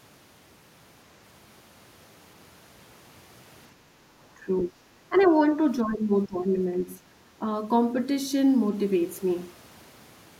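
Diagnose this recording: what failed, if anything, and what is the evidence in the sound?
The failure sits in call processing, in the echo canceller. From 3.76 to 4.08 s the room background dips by about 6 dB for roughly a third of a second, then returns. This is background gated by the echo canceller. While the far end was playing through the loudspeaker, the canceller pulled the microphone gain down hard. The room tone fell with it. Once the canceller released, the background came back up.

The talker's speech dips three times: 4.37 to 4.77 s, 5.09 to 5.13 s, and 5.83 to 6.51 s. The first drop is around 15 dB deep. The other two are around 10 dB. The likely cause is speech suppressed in double talk. Both sides spoke at once, and the canceller could not tell local speech from loudspeaker echo. So it attenuated both.

From 5.17 to 5.27 s a faint second voice breaks through. It sits roughly 25 dB below the main speech. 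It is a brief scrap, wedged between the suppression events. This is likely the other side's voice leaking through. The far end was playing on the talker's loudspeaker. The echo canceller did not fully subtract that path from the microphone signal. A short residue of the far-end voice slipped into the outgoing audio.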